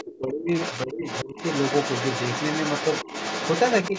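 A speech recording in which a second voice keeps intruding: the other side's voice leaking through, heard briefly at 0.00 to 0.04 s, again from 0.54 to 0.86 s, and then continuously from 1.06 s to the end, roughly 10 to 15 dB under the main talker. It is likely residual loudspeaker echo the canceller failed to remove, and unlike crosstalk it follows the far party's speech. Separately, the talker's own voice is speech suppressed in double talk at 0.03 to 0.51 s, 0.86 to 1.06 s and 1.24 to 1.37 s, sinking by around 20 to 25 dB while both sides overlap. This is not a dropout, because the dips likely coincide with far-side playback as the canceller ducks everything it cannot separate.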